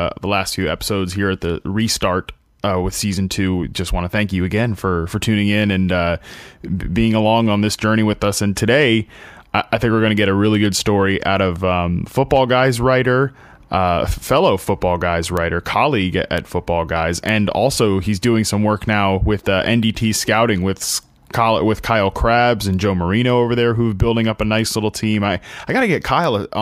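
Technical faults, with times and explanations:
15.37, 16.38, 17.29, 21.34 and 26.24 s: bit error spike. Isolated sharp ticks, the first three reaching about -2 dBFS around "colleague at", the last two about -8 dBFS. A flipped bit throws one or two samples far off before they snap back, giving a lone needle on the waveform and a thin full-height vertical line on the spectrogram.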